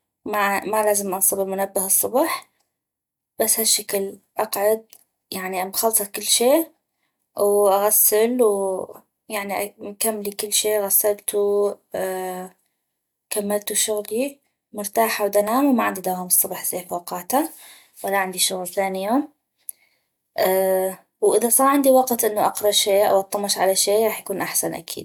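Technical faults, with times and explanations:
15.48 s and 20.47 s, block of digital silence: at each point a very short stretch of output, about 0.67 ms and consistent with a 32-sample block, was written as zeros instead of audio, most likely because the buffer was not filled in time. The speech drops straight to silence and returns with no fade, so the abrupt edges produce a brief tick rather than an audible gap.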